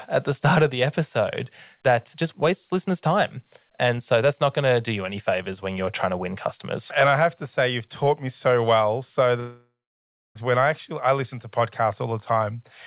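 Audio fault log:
9.40–10.38 s, long network dropout: packets likely stopped arriving for nearly a second, so the receiver stretched the last 4 kHz-limited sound into a fading buzz, then left about 0.65 s of near-silence before the speech resumed further on, the missing stretch gone.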